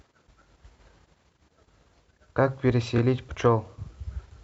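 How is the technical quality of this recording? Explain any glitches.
The recording has two brief stutters where a tiny slice of the speech plays twice. At 1.01–1.03 s and again at 2.97–2.99 s there is a quick hiccup. These are repeated frames: a 26.1 ms block, which fits a single compressed frame, was decoded a second time, adding 26.1 ms each time.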